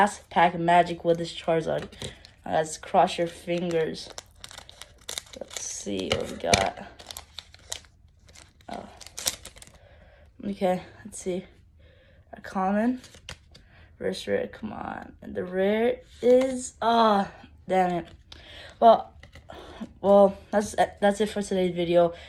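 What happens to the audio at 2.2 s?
Nothing goes wrong at 2.2 s; the audio plays through that moment intact, with no dropout, click or other audible fault.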